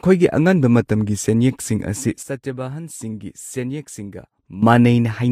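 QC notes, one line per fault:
2.23–4.63 s, sudden gain jump: right after "ꯑꯉꯟꯕ ꯃꯇꯝꯒꯤ ꯁꯦꯟꯌꯦꯛꯁꯤꯡ ꯑꯁꯤ" the speech and its background noise fall together by about 12 dB in one step, then come back at 4.63 s. The likely cause is a digital gain change applied from one sample to the next without a ramp.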